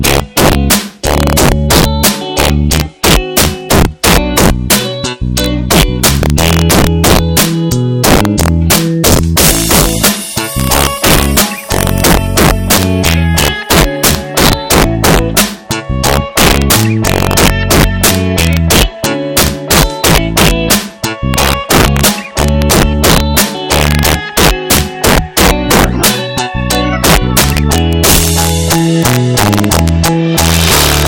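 Integer overflow runs through the whole clip. The signal was pushed about 9 dB past full scale. Peaks that cross the integer limit are not held at the ceiling. They wrap around to the opposite extreme. Roughly seven percent of samples land over the limit. Each one jumps across the full range. The result is a harsh, violent crack on the peaks. It is far sharper and more abrupt than ordinary clipping.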